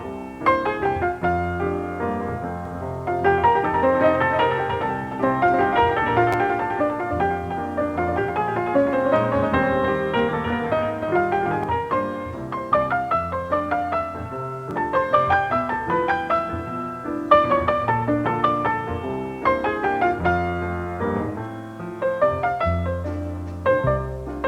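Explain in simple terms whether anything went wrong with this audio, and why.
From 2.65 to 11.64 s there's a doubled audio track: a second, quieter copy trails about three tenths of a second behind, likely from a slower capture path. There are also two repeated buffers, where new audio arrived late and the device replayed its last tiny slice, roughly 10 ms long. That causes a brief stutter at 6.33 to 6.35 s, with two extra plays, and a quick click at 14.71 s.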